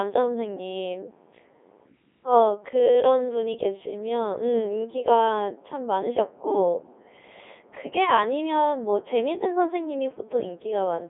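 Throughout, the speech is rebuilt from sine waves by a Codec 2 vocoder. It sounds heavily robotic and buzzy, with nothing above 3.8 kHz.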